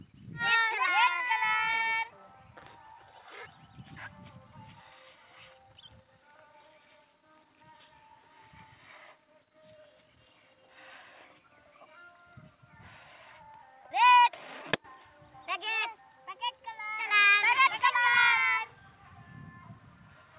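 Nothing here counts as a fault: the sound comes across the call path intact, and the missing top end above about 4 kHz is just the narrow band you'd expect from a telephone-style codec such as G.711.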